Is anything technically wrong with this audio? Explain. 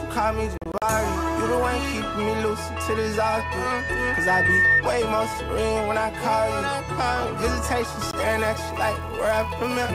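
Yes, there are three distinct problems.

Between 0.58 and 0.82 s the audio drops out in several short holes totalling about 120 ms, the longest around 40 ms, with another gap at 8.11 to 8.14 s. This is likely a Bluetooth dropout: packets reach the headphones too late and are discarded, so the output mutes, which fits six lost packets in the first cluster and one in the second. Unlike a stall, the sound resumes further along, as if it had kept playing.

From 2.88 to 4.82 s a loudspeaker feedback squeal appears: a single 1.8 kHz tone swells over roughly two seconds to about 10 dB above the programme. The microphone is picking up its own loudspeaker, and at that frequency the loop gain exceeds one. Unlike an added test tone, it grows by itself rather than starting at full level.

From 7.99 s to the end, a 200 Hz buzz rides on the signal because a filter restarted on every block. Each block begins from silence, leaving a small transient at the block rate. 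Unlike mains hum, the buzz rises and falls with the signal's level and vanishes in quiet moments.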